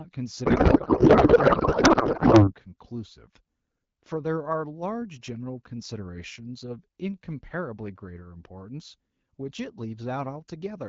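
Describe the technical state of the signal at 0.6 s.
At 0.6 s you're in a codec payload misread running from 0.45 to 2.53 s: octet-aligned AMR frames parsed as bandwidth-efficient, so the speech turns into garbled, warbly noise.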